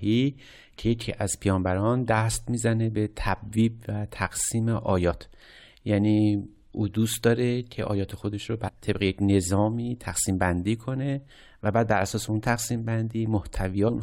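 At 5.10 to 5.12 s, 8.67 to 8.70 s and 13.87 to 13.90 s the speech hits brief blips from damaged data in a compressed stream: corrupted bytes make the decoder misread those frames and lose sync until it finds a clean header.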